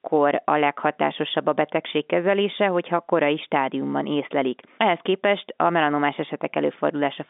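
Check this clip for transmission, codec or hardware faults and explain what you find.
Nothing stood out on listening; the speech comes across as ordinary telephone-band audio with its top end stopping at about 3.7 kHz.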